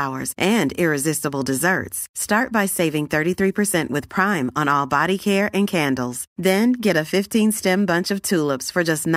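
From 7.16 to 8.89 s, sample clock jitter appears. Timing wobbles under a microsecond add a faint hiss, about 40 dB down, strongest on bright, loud speech.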